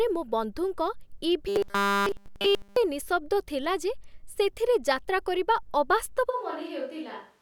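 Robotic sound from repeated short buffers runs from 1.48 to 2.76 s. For that stretch the speech becomes a rigid, metallic buzz pitched at 200 Hz that follows the syllables only loosely, with no natural audio getting through at any point. The likely cause is new audio arriving too slowly, so the playback filled the gaps by looping a very short slice over and over; a 200 Hz buzz fits a repeated slice of about 5 ms.

A switch to a distant microphone follows at 6.31 s and lasts to the end of the clip. The change is abrupt: the speech suddenly sounds roomy and hollow, loses low-end body and drops a few decibels in level, while faint background noise sits well below the speech. This likely means the close microphone's signal dropped out and the recording fell back to a pickup much farther from the talker.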